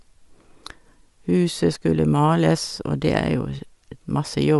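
Throughout, the speech has a grainy, breathy top end and nothing above 11.5 kHz, likely from Bluetooth LC3 compression filling its discarded upper bands with noise.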